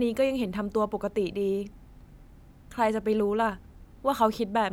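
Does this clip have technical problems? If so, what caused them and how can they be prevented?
No, there are no technical problems to hear in this clip. Nothing needs to be prevented here.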